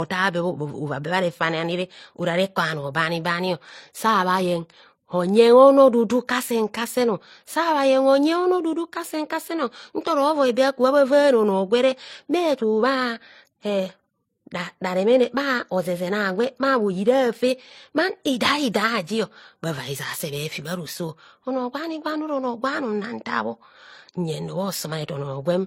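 Throughout the speech, two different kinds of compression artefacts are heard together, and nothing sounds above about 16.3 kHz. This likely comes from transcoding between lossy codecs, consistent with a low-rate MP3 being re-encoded to HE-AAC, each pass adding its own damage.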